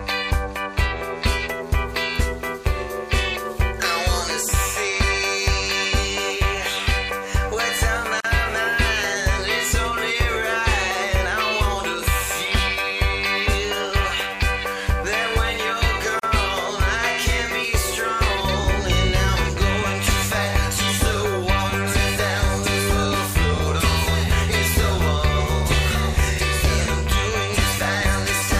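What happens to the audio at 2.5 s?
Nothing goes wrong at 2.5 s; the audio plays through that moment intact, with no dropout, click or other fault.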